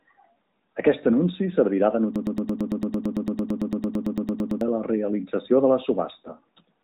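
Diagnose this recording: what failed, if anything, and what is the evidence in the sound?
Broken-record loop at the playback or stream buffer stage: from 2.16 s to 4.61 s, a 112 ms fragment repeats exactly, back to back, 22 times, and the audio due in that span is lost. The likely cause is a stalled stream re-sending its last held fragment.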